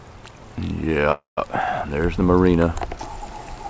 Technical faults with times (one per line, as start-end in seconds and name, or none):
1.12-1.39 call audio freeze